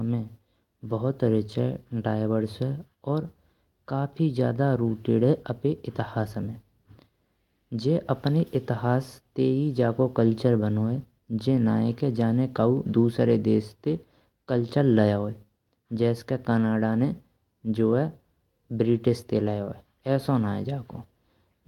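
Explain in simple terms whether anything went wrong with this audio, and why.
Nothing went wrong; no faults can be heard in this speech.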